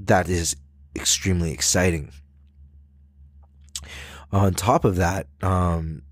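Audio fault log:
No audible faults detected.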